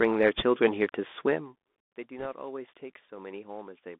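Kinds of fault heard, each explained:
Bluetooth CVSD headset codec: This narrowband headset codec sends one bit per sample, each bit only saying whether the wave goes up or down. It adapts its step size as it goes. Here the whole clip sits in a band from about 250 Hz to 3.6 kHz, which fits a 64 kbps CVSD stream. The damage is plainly audible. Sharp, loud high sounds outrun the step and distort, s sounds turn scratchy, and a grainy hiss lies under the speech.
bit errors on a Bluetooth voice link: Some bits on the headset link arrived flipped. Each bit carries only a small step, and the codec recovers quickly. So there are no loud clicks. Instead a rushing, crackly noise rides on the speech. It appears from 0.38 to 0.42 s, at an error rate around one percent. It returns from 2.19 to 2.27 s, a little denser, as the error rate there is somewhat higher.
electrical switching spike: At 0.89 s a sharp snap sits on top of the speech. 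It is very brief, a tight burst rather than a sustained noise. It does not belong to the speech itself. A snap of this shape is likely an arc from a nearby switch, motor or static discharge that the audio line picked up. The sound under it carries on unchanged before and after.
zipper noise: From 1.32 to 1.70 s the level falls by about 15 dB. It does not slide down smoothly. It drops in steps of 1 dB each, about 50 times a second, with no smoothing between them. Every step puts a tiny click into the waveform. Together the clicks form a fine ticking, zipping texture that lasts only while the level is moving. It stops once the drop is complete.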